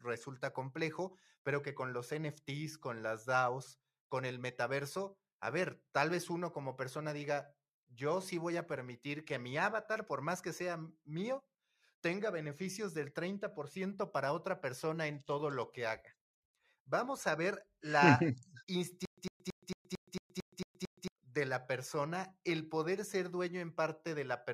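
From 19.05 to 21.08 s, stutter with silent gaps repeats a 102 ms burst every 225 ms, likely from stream stalling, before "de la persona el".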